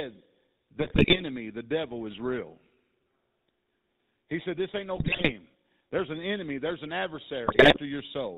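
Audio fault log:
throughout  GSM full-rate codec: The speech has a plainly audible buzzy, gravelly roughness, and nothing comes through above 4 kHz, so sibilants are dull and the top end is gone. The codec rebuilds each stretch of speech from a vocal-tract filter driven by a regularly spaced pulse train that keeps only every third excitation sample. That coarse excitation produces the buzz, and the narrow band produces the muffling. The sound fits the 13 kbps full-rate stream.
0.80–1.22 s, 4.96–5.31 s, 7.46–7.79 s  GSM bit errors: In each of these three bursts the speech breaks into squawks, pops and a gargling quality. Corrupted bits are reaching the speech decoder, which sounds like a few percent of bits flipped. When the filter, pitch or gain values arrive wrong, a frame is rebuilt with a bent spectrum or a sudden jump in gain. Several consecutive frames are affected each time.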